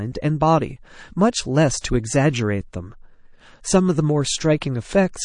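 MP3 compression runs through the whole speech clip, and the damage is plainly audible. The likely cause is a low-bitrate MP3 encode, with the damage pointing to something around 40 kbps. With so few bits, the encoder drops weak frequency lines. Those lines switch on and off from frame to frame, leaving a watery, swirling texture, metallic chirps on s sounds, and smeared attacks.

Pre-echo appears from 1.82 to 1.84 s, a brief hiss of about 26 ms just ahead of a sharp attack. The codec spreads its quantisation noise across an entire transform block, so the noise sized for the loud onset also fills the quiet gap before it, rising by about 21 dB there. The spread fits a long block of roughly 52 ms with no switch to short blocks, so the attack sounds softened and smeared.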